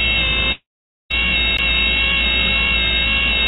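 Long network dropout, 0.52 to 1.12 s: the sound breaks off for about 0.58 s, most likely because packets stopped arriving. The receiver briefly smears the last sound into a fading buzz, then holds near-silence for roughly half a second before the audio resumes further on, with that stretch gone.

CD skip, at 1.57 s: a tick and a very brief mute, around 15 ms, then the sound jumps to a different point, as if the pickup had slipped to another turn of the disc's spiral. Throughout, the band stops at 4 kHz, which fits a G.711 call path.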